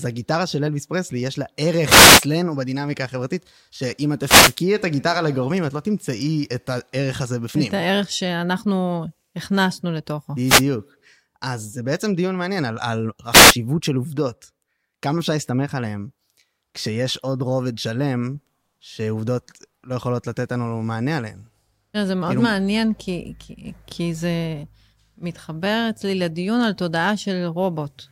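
Wireless microphone noise hits occur at 1.86 to 2.24 s, 4.22 to 4.57 s, 10.45 to 10.63 s and 13.31 to 13.54 s. Each is a brief swish of static over the speech, as the analogue FM radio signal fades through reflection cancellation and receiver noise surges up.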